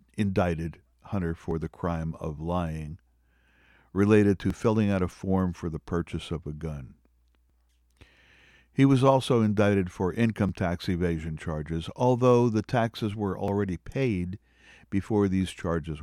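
At 1.51 s, just before "the crime of lying", the speech skips briefly. The same skip returns at 4.50 s, at 7.50 s just after "purchase of a gun", at 10.49 s, and at 13.48 s just after "although the taxes were". The gaps repeat every 3.0 s. Each loses only a few milliseconds, and the two sides butt together with no silence. This points to audio missing between chunks, likely from a recorder dropping samples while it switches from one block to the next.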